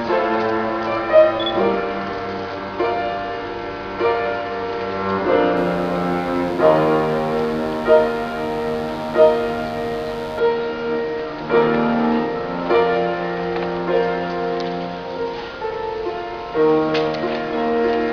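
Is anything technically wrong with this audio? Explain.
Yes. From 5.56 to 10.39 s there is mains buzz. A dimmer, rectifier or missing shield on the 50 Hz supply lets sharp switching spikes in twice per cycle. This gives harmonics reaching several kHz. The result is a steady, raspy buzz, roughly 20 dB below the sound.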